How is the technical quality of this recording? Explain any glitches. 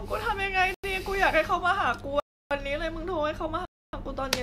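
Three blocks of digital silence break the speech, at 0.74–0.84 s (93 ms, fitting a 4096-sample buffer), 2.20–2.51 s (309 ms) and 3.65–3.93 s (279 ms). Samples drop abruptly to silence and return. The waveform shows dead-flat lines, and the spectrogram shows empty columns.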